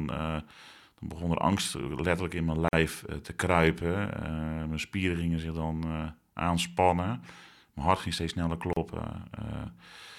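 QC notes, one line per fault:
2.68–2.73 s and 8.73–8.76 s, gap at a join of encoded pieces: speech drops into 47 ms and 34 ms silences after "in mijn" and "hart ging steeds sneller", 6 s apart, then resumes where it stopped; separately encoded segments were joined with their encoder start delay and last-frame padding left in.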